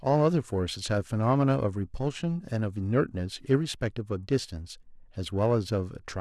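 Periodic clock jitter runs through the whole speech clip. The converter's clock wobbles at about 1 kHz, putting paired sidebands around every component and giving a metallic roughness. Unlike broadband noise or hiss, it grows on brighter sounds and disappears in pauses.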